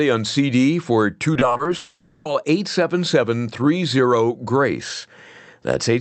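From 1.33 to 1.67 s the speech turns choppy, with small pieces dropping out. This is repeated packet loss, heard as robotic sound. Six short gaps, none longer than 20 ms, were each patched by extending the preceding sound, so about a third of that stretch is filled-in audio.

From 1.77 to 2.27 s the speech gives way to a smeared, fading buzz that thins almost to silence before the audio resumes with that half-second missing. The likely cause is a long network dropout: the receiver kept extending the last sound for roughly 480 ms, then played a brief moment of silence, and the content from that gap never arrives. The call path itself, which runs through Opus and limits the audio to about 8 kHz, carries the sound on either side of these breaks.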